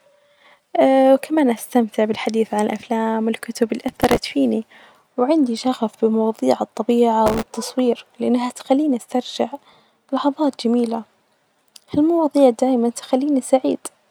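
Speech with two bursts of processor overload crackle, from 3.88 to 4.20 s and from 7.26 to 7.53 s. The sound turns gritty and torn. Dozens of tiny buffers, around 1.5 ms each, miss their deadline. Each gap repeats stale audio with hard edges.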